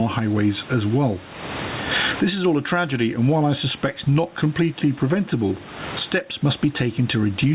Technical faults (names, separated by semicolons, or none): gain pumping